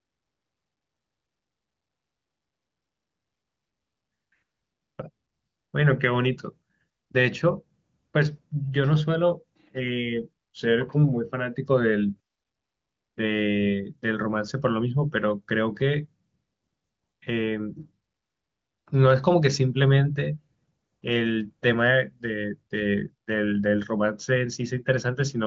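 No technical faults are audible.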